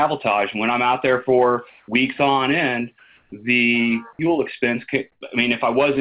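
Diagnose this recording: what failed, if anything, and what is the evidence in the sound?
In the call-processing stage, the sender's voice detector likely switched to discontinuous transmission during pauses, and the receiver filled them with synthetic comfort noise in place of the background. At 1.70 to 1.88 s, 2.99 to 3.32 s and 5.12 to 5.21 s, the quiet background, about 36, 39 and 51 dB below the loud passages, turns into a steady, featureless hiss. It is about 1 dB and 4 dB quieter in the first two gaps and about 2 dB louder in the last. The path's band limit stays at 4 kHz, which fits a G.711 A-law call.

The same voice detector was likely slow to register returning sound, so the opening of the sound after the first two gaps was never sent. At 1.86 to 1.88 s and 3.30 to 3.32 s, about 20 ms of onset is missing. The receiver fills that gap with the tail of the comfort noise, and the sound then cuts in abruptly without its soft beginning. 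This onset clipped by the voice detector hits exactly where the first two comfort-noise gaps end.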